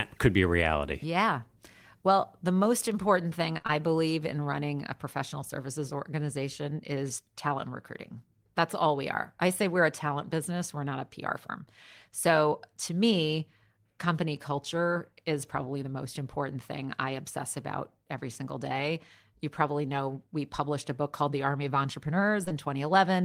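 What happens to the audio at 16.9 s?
At 16.9 s the speech carries on intact, with no audible fault at that moment.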